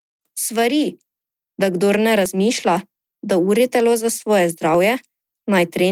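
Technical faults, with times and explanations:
2.26 s and 4.75 s, audio missing between chunks: the speech jumps abruptly at each point, the first right after "da kdor ne", with roughly 10 ms of sound gone and the two sides butted together without a gap, giving a small discontinuity. The skips fall about 2.5 s apart, which points to the recording or processing chain likely dropping about 10 ms of audio each time it closes one 2.5 s block and starts the next.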